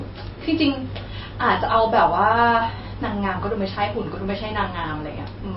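MP3 compression, likely, runs throughout this speech clip: nothing sounds above 5.6 kHz, and the damage is plainly audible, which fits a starved bitrate near 24 kbps, where the encoder cuts the treble at a fixed point and discards weaker frequency detail frame by frame.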